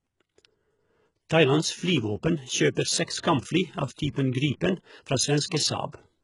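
HE-AAC compression runs throughout this speech, likely the cause of the gritty, lispy s sounds. Treble is rebuilt from copied lower bands, nothing is present above 11.1 kHz, and the heavy damage fits a very low bitrate near 12 kbps.

Pre-echo appears at 3.18–3.23 s, just before "kampfly av", and again at 5.46–5.51 s. The codec spreads block quantisation noise ahead of each attack, producing a short hiss of about 50 ms and 58 ms and softened onsets.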